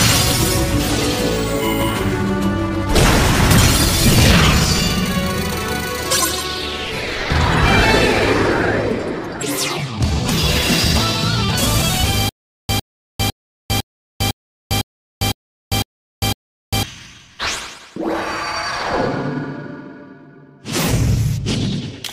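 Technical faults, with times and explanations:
12.29–16.83 s, stutter with silent gaps: the playback stalls and a short burst of about 104 ms keeps coming back, followed each time by roughly 400 ms of digital silence, so the fragment recurs every 504 ms for nine repeats. The even pace and the dead-quiet gaps between identical bursts point to a player or stream that likely stalled and, at each retry, replayed its last buffered fragment before running empty. The audio that belonged in this span is lost.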